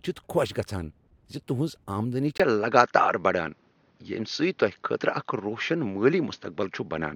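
After "تہنٛز آمدنی", at 2.38 s, a 20 ms gap leads into duller speech, likely an input switched to a poorer device. The spectrogram is empty above 6.6 kHz, and the waveform level shifts by about 5 dB.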